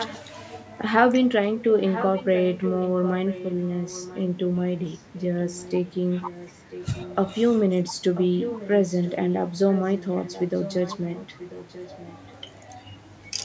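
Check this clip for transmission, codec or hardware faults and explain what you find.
One fault is audible, an echo leak, heard at 0.0 to 0.18 s, 1.84 to 4.23 s, 6.22 to 7.16 s, 8.15 to 9.35 s and 9.69 to 12.32 s. A copy of the speech returns about 0.99 s late, roughly 10 to 15 dB quieter, likely from a loudspeaker whose echo canceller let part of the pickup through.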